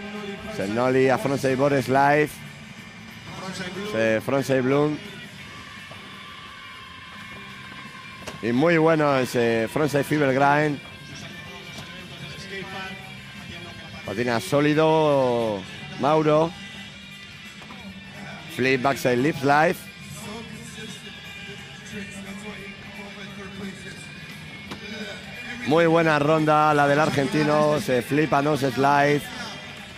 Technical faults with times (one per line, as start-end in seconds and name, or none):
none